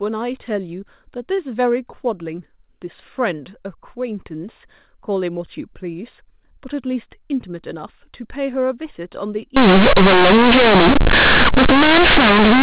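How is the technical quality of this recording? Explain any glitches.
The recording has one serious glitch at the very end, from 9.56 s to 12.62 s, where the speech turns into a harsh, blaring mess. Up to that point you can hear the narrow A-law telephone band, with nothing above 4 kHz.

That final stretch is companded audio read as linear. The A-law bytes are played straight out as plain 8-bit samples and never expanded. Each sign change swings the waveform across about half its range, so quiet parts hit as hard as loud ones, and you get a loud buzzy roar with heavy noise filling the gaps.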